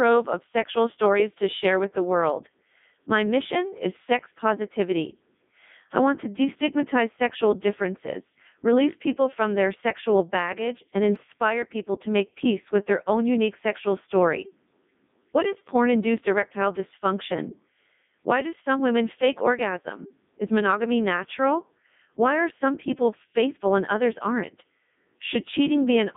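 Throughout, the speech passes through the Codec 2 vocoder, likely at its 3.2 kbit/s rate. Resynthesised from sine waves, voices sound robotic and buzzy, confined to 150 Hz–3.6 kHz.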